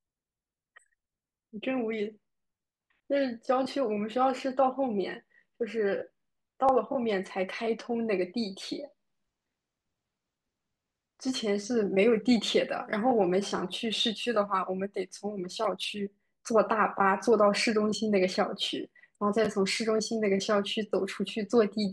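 At 6.69 s, 13.58 s and 19.45–19.47 s, a repeated buffer: late audio made the device replay one 11.6 ms block, fitting a 512-sample buffer, twice at 19.45 s. Each is a brief buzzy click, with identical waveform segments and a vertical line at every hard join.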